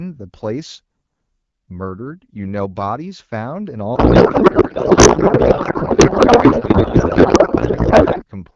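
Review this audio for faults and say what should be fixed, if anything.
Codec payload misread, from 3.95 s to 8.24 s: the speech abruptly gives way to garbled noise and warble that barely tracks it, and this continues to near the end. Up to that point the AMR wideband (HD Voice) codec carries the speech clearly at 12.65 kbit/s. The switch points to the receiver unpacking octet-aligned AMR frames as bandwidth-efficient ones, so every field lands in the wrong bit position. To prevent it, make both ends negotiate and enforce the same AMR payload format in the session description.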